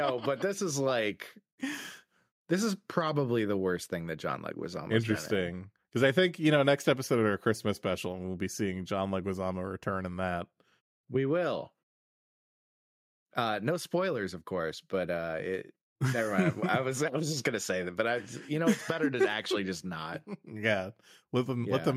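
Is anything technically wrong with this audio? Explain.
No, nothing technically wrong turns up here; the speech comes through without any fault worth flagging.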